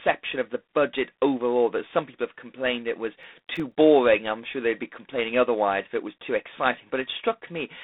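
Speech heard down a narrow telephone line carries G.726 ADPCM damage throughout. The voice sits in a band of roughly 250 Hz to 3.6 kHz with nothing above 3.8 kHz, and a harsh, rasping hiss rises and falls with the speech level. That hiss is the coarse quantisation of each sample's difference from the predicted value, and its strength fits the 24 kbit/s mode. On a spectrogram the energy stops flat near 3.8 kHz, and a grainy noise floor fills the gaps between harmonics wherever speech is loud. Between "have complained it was" and "I'm sure they'd be", from 3.17 to 3.72 s, a burst of processor overload crackle tears across the audio. The processor fell behind and missed around ten of its buffer deadlines, and the timing fits buffers of roughly 1.5 ms. Each missed buffer came out as a tiny stretch of silence with hard edges. On the waveform these show as scattered flat dropouts with abrupt steps. 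On the spectrogram each one makes a thin vertical broadband streak.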